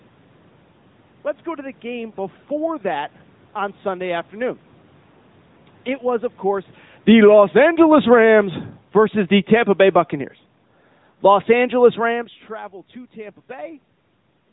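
Throughout, the speech carries the sound of the AMR narrowband mobile codec. Nothing above 3.8 kHz survives, so consonants lose their hiss and the voice sounds boxed in. The codec rebuilds speech from a vocal-tract model fed by a few pulses per subframe, and the damage is plainly audible: a buzzy, synthetic edge, with the background smeared into a warble. That level of coding fits a bitrate around 10 kbps. A plain low-pass filter would dull the top without adding this buzz.

Just after the talker changes distance at about 6.5 s, automatic gain falling sets in from 6.94 to 7.44 s. The gain control judged the input too loud and pulled its gain down by about 12 dB over half a second, so voice and room noise sink together. That shared drop separates it from a talker leaning back, where the voice changes but the room noise stays put.

Automatic gain rising follows from 7.4 to 10.03 s. The control decided the signal was now too quiet and lifted its gain by about 4 dB over more than two seconds. 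The swell is slow, and the background rises with the speech, which rules out someone moving closer.

A second automatic gain falling runs from 11.1 to 12.48 s, with a drop of about 3 dB. The speech and its background settle lower over more than a second. The talker's movement at about 12 s overlaps it, but only the gain change carries the room noise down as well.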